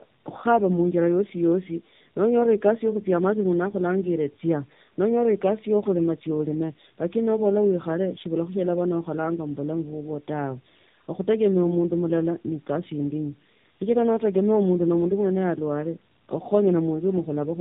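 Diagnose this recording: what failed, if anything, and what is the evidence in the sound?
Rough, muffled, warbly speech throughout, with nothing above 3.7 kHz: tandem speech coding, a codec-stage fault where two speech codecs in a row each recode prior damage.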